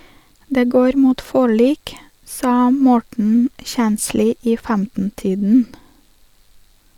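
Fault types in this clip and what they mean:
Nothing stood out on listening to the speech; no fault could be heard anywhere in the recording.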